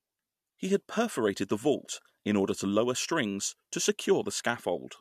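Speech recording with no technical faults audible anywhere.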